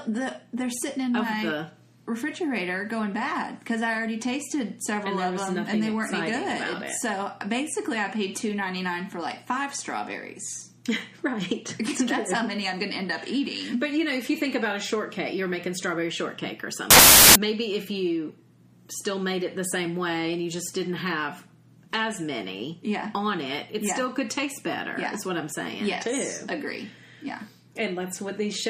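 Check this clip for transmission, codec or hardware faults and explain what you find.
One fault: from 16.91 to 17.36 s, samples built from the wrong bytes. Misassembled sample bytes push the rapidly changing low-order bits into the high positions, producing loud, harsh broadband noise for about 0.45 s.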